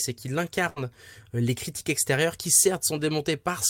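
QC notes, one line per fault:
0.69–0.85 s, burst of packet loss: the sound stretches into a held, fading tail for about 67 ms, then jumps ahead; consecutive lost packets left about 60 ms missing.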